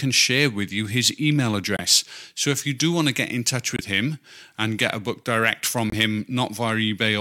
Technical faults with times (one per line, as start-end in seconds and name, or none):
1.77-1.80 corrupt frame muted
3.76-3.81 corrupt frame muted
5.90-5.94 corrupt frame muted